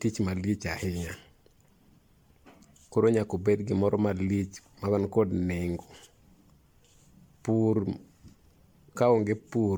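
Speech with generation loss throughout: the sound is swirly, hollow and smeared, with blurred consonant attacks and nothing above about 19.9 kHz, likely from around seven successive MP3 passes, each re-quantising on a shifted frame grid, at a rate consistent with 96 kbit/s.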